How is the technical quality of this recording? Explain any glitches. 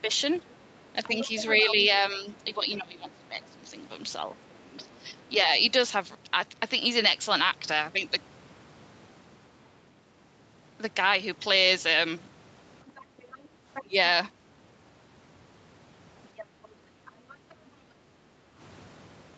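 The recording is a speech call with echo-control problems: a second voice leaks in, and the talker and the room sound are pulled down at several points. The audio is band-limited to about 8 kHz by the call path.

Other side's voice leaking through occurs at 0.34–2.12 s, 4.34–5.08 s, 12.87–13.82 s and 16.24–17.54 s. A fainter second voice sits under the talker, loudest at the start (about 10 dB below the speech) and weakest at 4.34 s (about 30 dB below). The likely cause is loudspeaker playback that the echo canceller did not fully remove from the microphone.

Speech suppressed in double talk runs from 0.93 to 5.18 s, covering roughly two seconds in pieces, with dips of about 15 dB. A shorter, deeper cut of about 20 dB occurs at 13.81–13.95 s. The talker's level drops while the far side plays on the loudspeaker, likely because the canceller cannot separate near speech from echo and attenuates both.

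Background gated by the echo canceller appears at 13.05–13.53 s and 16.47–18.58 s. The room sound sinks by about 8 dB for roughly 0.3 s and 1.5 s of those spans, then returns. The canceller clamped the microphone down hard during loudspeaker playback and released it afterwards.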